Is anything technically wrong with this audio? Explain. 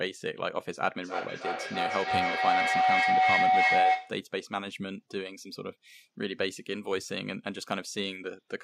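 Yes. From 1.02 to 4.27 s there is a feedback howl. Two devices in the same room seem to share the call. Sound leaves one loudspeaker, enters the other microphone, and returns louder each trip. The repeats grow instead of dying away. They narrow to one favoured pitch, around 700 Hz. The tone pulses roughly every 300 ms, matching the loop's delay. It peaks about 8 dB above the speech, then stops when the loop breaks.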